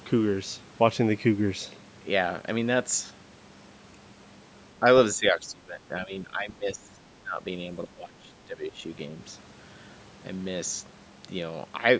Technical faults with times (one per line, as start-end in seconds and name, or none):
4.80-4.85 speech suppressed in double talk
5.16-7.45 speech suppressed in double talk
7.85-8.84 speech suppressed in double talk